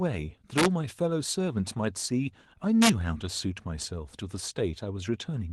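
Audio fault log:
0.58–0.66 s and 2.82–2.89 s, integer overflow: On these two loud bits of speech you get harsh, violent cracks, far nastier than ordinary clipping. The signal went about 3 dB over full scale the first time and about 2 dB the second. Instead of being held at the limit, those peaks wrapped around to the opposite sign, so each overshooting sample jumps straight across the whole range and you hear a sharp snap.
2.27–2.29 s, lost packet rebuilt from error correction: For about 20 ms there's a brief patch that sounds rougher and noisier than the speech around it, but there's no dropout. That fits a single lost 20 ms packet. The next packet carried a low-bitrate backup copy of it, and the Opus decoder played that copy in its place, so the gap is filled with lower-quality audio. The call path itself runs Opus at 32 kbps with the top end reaching about 12 kHz.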